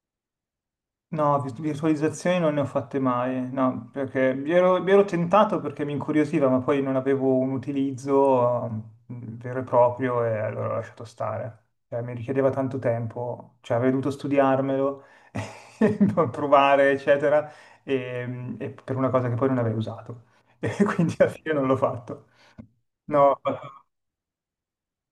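A speech recording with no technical faults to report.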